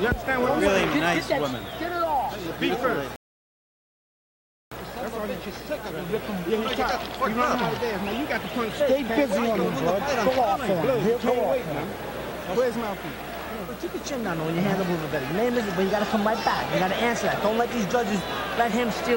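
At 3.16 s the audio drops to silence and stays there until 4.72 s, a rebuffering stall. The player exhausted its downloaded audio and halted playback while waiting for more data to arrive. When sound returns it picks up at exactly the point where it stopped, so no material is skipped or repeated. The only cost is time: the gap inserts about 1.56 s of dead air into the playback.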